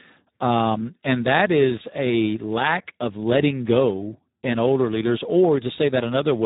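Speex codec damage runs throughout the speech: heavy, hoarse, noisy CELP coding that fits roughly an 8 kbps setting, starving the excitation, with nothing above 3.8 kHz.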